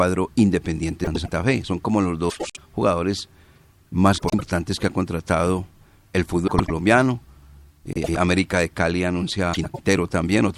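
Frames out of order appear six times in this speech, at 1.04 to 1.31 s, 2.30 to 2.59 s after "como los", 4.17 to 4.41 s, 6.48 to 6.71 s after "contratado el", 7.93 to 8.17 s, and 9.53 to 9.79 s. Each time, two adjacent blocks of about 104.5 ms play swapped, which fits runs of four frames each. The stretch sounds like a garbled flutter. No time goes missing.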